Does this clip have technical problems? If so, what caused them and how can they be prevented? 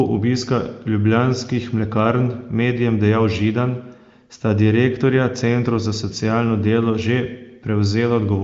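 No, nothing here needs fixing, and the sound comes through the AMR wideband (HD Voice) channel at its high 23.05 kbit/s rate with nothing above about 7.6 kHz, as you'd expect from that kind of call path.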